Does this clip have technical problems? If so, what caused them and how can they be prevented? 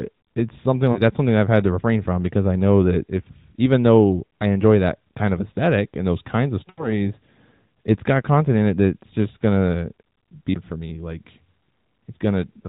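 Yes. There are lost AMR speech frames after "it's something" at 0.92 to 1.0 s and after "and those kinds of" at 6.70 to 7.03 s, with about 40 ms and then 80 ms of data missing. The decoder fills each gap by reusing the last good voice settings at falling gain. The sound smears and fades rather than cutting to hard silence, as a plain dropout would. A stronger radio link or better channel error protection would prevent it.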